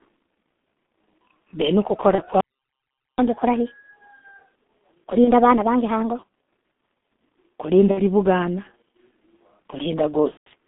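G.723.1 codec damage runs through the whole speech recording: the band is confined to roughly 200 Hz to 3.5 kHz, and the heavy, slow-updating model leaves a muffled, hoarse tone with smeared consonants, consistent with the coder running near 6 kbit/s. VoIP packet loss concealed by the speech codec appears at 2.15 s, 5.24 s, 7.91 s and 10.31 s, with gaps of about 30 ms, 30 ms, 60 ms and 150 ms. Each time, the decoder extends its last pitch and filter state into a buzzy tone or coloured noise that fades, and the voice stays weak briefly afterwards. Catch-up at higher speed runs from 3.19 to 6.19 s, where playback speeds up to 1.25 times and the pitch rises by about four semitones. This is backlog from a stall being drained by resampling before speed and pitch return to normal.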